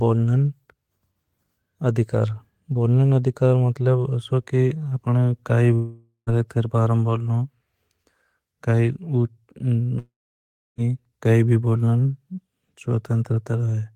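At 5.75 s the speech breaks off for about 0.52 s, to 6.30 s. The last sound is stretched into a decaying buzz, with about 0.12 s of silence at the tail. A second, longer gap runs from 9.99 to 10.81 s, about 0.80 s missing. There the fill collapses quickly and about 0.68 s is plain silence. Each time the speech resumes further on, skipping the lost portion. The likely cause is a long network dropout, with the receiver concealing the gap until it gives up.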